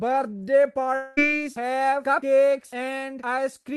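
From 0.95 to 1.19 s the speech gives way to a buzzy, smeared continuation of the preceding sound that fades without ever reaching silence, and about 220 ms of speech is missing when it resumes. This is most likely a long network dropout, with the receiver filling the gap by extending the last sound. On a spectrogram the harmonics flatten into repeated, blurred bands that fade out, all below the call codec's cut-off near 12 kHz. The waveform shows a decaying, regular envelope before speech restarts abruptly.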